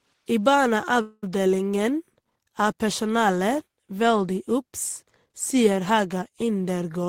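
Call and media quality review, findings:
Call audio freeze, 1.01–1.24 s. Speech stalls; the last sound is stretched into a fading buzz or hiss for about 0.21 s, then about 20 ms of silence. Likely jitter buffer underrun from delayed packets. Audio resumes where it stopped, nothing lost, now 213 ms later.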